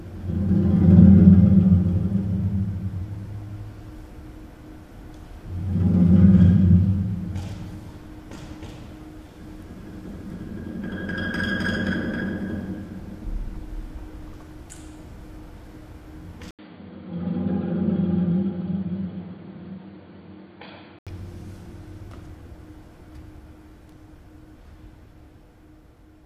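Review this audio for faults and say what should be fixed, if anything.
The recording input was likely switched to a poorer device, another microphone or a headset's call profile, from 16.51 s to 21.07 s. At 16.51 s there is a gap of about 80 ms of silence, then the sound turns dull and boxy, with nothing above 4.6 kHz. The level drops by roughly 10 dB, and a new noise floor appears about 50 dB below the signal. The original full-band sound returns at 21.07 s. To prevent this, lock the recording device and disable automatic switching to headset or call profiles for the whole session.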